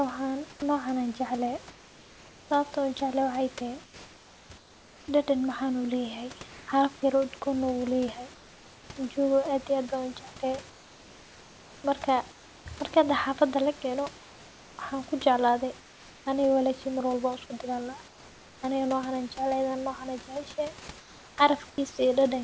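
From 0.50 s to 18.62 s, the pauses between phrases lose their real room background, about 6 s of it in total, and a steady, featureless hiss takes its place. This is comfort noise in place of the background, likely from discontinuous transmission: the sender goes quiet when its voice detector hears no speech, and the receiver synthesises roughly matched noise. The room noise, about 24 dB below the speech, loses its texture in those gaps.

At 0.60 s, speech resumes with a hard edge. About 20 ms of its beginning is missing, and the opening sound lands abruptly without its soft rise. This is an onset clipped by the voice detector. The likely cause is that the detector reacted late, so those first milliseconds were never sent and filled noise sat where they belonged.

From 20.98 s to 21.78 s, the same substitution returns, with about 0.48 s of background swapped for smooth synthetic noise. 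Throughout the clip, nothing is present above 8 kHz, which fits a wideband call codec such as G.722.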